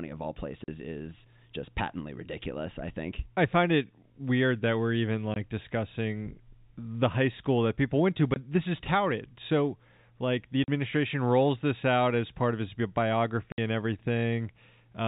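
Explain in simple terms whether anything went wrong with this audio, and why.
The speech has short gaps of dead silence at 0.64 to 0.68, 5.34 to 5.36, 8.34 to 8.36, 10.64 to 10.68 and 13.52 to 13.58 seconds. This is packet loss filled with silence. Pieces of sound went missing on the way and were replaced with nothing. Each gap lasts 20, 40 or 60 ms, which fits audio sent in 20 ms packets. The gaps start and stop abruptly. The telephone-style G.711 coding shows as the narrow, phone-like tone.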